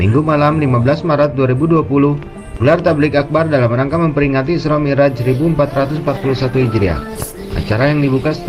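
At 5.78 s a call bitrate drop sets in and lasts to the end of the clip. The connection's bandwidth estimate fell, so the encoder had to work with far fewer bits. The sound turns coarse and watery, and the top end dulls as high frequencies are cut away. This fits the rate falling from about 48 kbps to about 14 kbps. It stays at that low level for roughly 2.6 s and never recovers.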